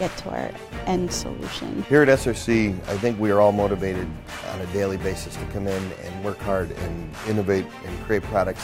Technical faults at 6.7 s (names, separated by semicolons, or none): drift correction step